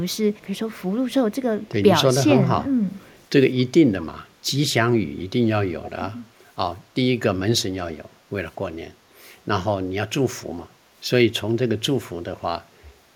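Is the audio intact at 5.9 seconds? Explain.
No. An echo leak runs from 5.84 to 5.91 s. A faint copy of the speech returns about 212 ms after the original, well below it in level, roughly 15 dB down. The likely cause is a loudspeaker on the other end of the call. Its microphone picked up the played-back speech. The echo canceller did not remove all of it. The leftover part was sent back as a brief, delayed repeat.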